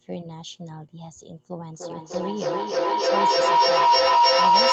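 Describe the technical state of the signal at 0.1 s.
At 0.1 s the speech signal is intact, with no fault present at that moment.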